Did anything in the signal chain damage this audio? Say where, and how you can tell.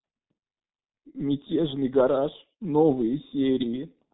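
Yes. The damage happens at the codec stage, and it sounds like the G.723.1 codec running heavily for the whole clip. The speech is muffled and hoarse, and consonants smear together, which fits a very low bitrate of about 6 kbit/s. On a spectrogram there is nothing above 3.8 kHz, and the harmonics look blocky because the codec updates its voice model only once per 30 ms frame, so fast transitions blur.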